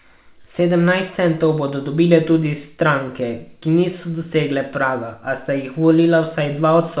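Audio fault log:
No faults are heard in this speech clip. It passes through a WebRTC call path with no content above 4 kHz, which fits a narrowband G.711 mu-law call.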